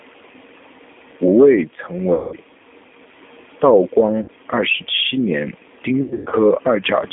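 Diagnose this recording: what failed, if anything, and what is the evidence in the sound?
G.729 codec, at the codec stage: the spectrogram is empty below 200 Hz and above 3.5 kHz. The rough, synthetic speech fits an 8 kbit/s pulse-based coder.

VoIP packet loss concealed by the speech codec, at the network stage: at 2.14–2.36 s after "吴慰曾", 4.22–4.30 s before "二十七年", and 6.02–6.35 s after "二十七年", the sound smears into a fading buzz or coloured noise. The spectrogram shows frozen, repeated harmonics, and the waveform's envelope decays as the decoder extrapolates.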